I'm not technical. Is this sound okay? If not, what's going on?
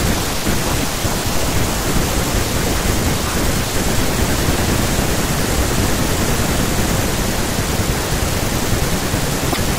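No. Near the very end of this speech clip, something likely went wrong with the MP3 file's broken bit reservoir. MP3 saves space by letting each small chunk of audio borrow room from the chunk before it. When chunks go missing, the next one reaches back for its data and finds the wrong bytes instead. That is what you hear from 9.52 to 9.57 seconds: a brief chirp, burst of noise or short gap, about two chunks long, where the audio jumps ahead.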